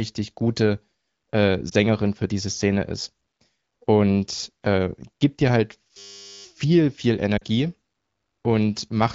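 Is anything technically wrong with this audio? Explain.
Yes, there are two kinds of fault, both dropouts or glitches on top of speech carried over AMR wideband (HD Voice) coding.

Lost AMR speech frames: At about 1.69 to 1.74 s, between "gute äh" and "für diese", there is a brief dip or warble lasting roughly 20 ms, the length of one speech frame. A second dropout, twice as long at about 40 ms, follows at 7.37 to 7.43 s, where two consecutive frames went missing. Those frames were corrupted in transmission and failed their checksum, so the decoder concealed each gap by repeating the last good pitch and vocal tract settings at reduced gain. The voice resumes a little weak or rough for a moment.

System hang loop: From 5.98 to 6.45 s, right after "äh gibt dir halt", the sound turns into a steady buzz for almost half a second. A single 10 ms slice of audio repeats exactly, 47 times in a row, at 100 Hz. 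The computer or audio driver froze while the sound hardware kept cycling through the same small ring buffer. A loop this short fuses into a tone at the loop rate rather than an audible stutter. Essentially no speech is skipped, and the audio picks up where it stalled once the system recovers.

The wideband codec itself leaves only light coding traces, which fits one of its higher bitrates.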